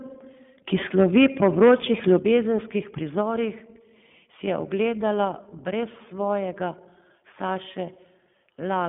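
Speech passes through the iLBC codec for the whole clip. Everything above 3.5 kHz and below 150 Hz is missing, and the voice has a slightly rough, synthetic grain. That grain fits 20 ms frames coded independently at around 15.2 kbps, as distinct from the smoother dullness of a plain telephone band-limit. Likely microphone overload flattens the loudest peaks from 0.98 to 1.75 s, about 10 dB over the limit with roughly 7 percent of samples cut, and again briefly from 2.10 to 2.16 s at about 2 dB over. The harsh crackle sits only on those peaks, which separates it from codec roughness that stays constant. Microphone volume stepped down is the likely cause of sudden level drops at 1.18 s (about 2 dB), 2.19 s (about 6 dB), 3.21 s (about 3 dB) and 5.25 s (about 3 dB, just before "brez svojega"). Voice and background fall together in one instant, unlike a fade or a compressor's gradual pumping, and the 2.19 s drop follows the second clipped burst.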